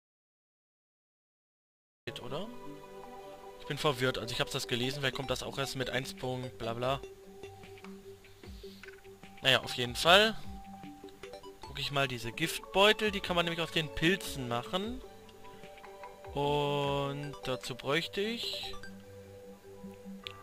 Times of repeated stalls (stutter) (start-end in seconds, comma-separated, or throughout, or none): none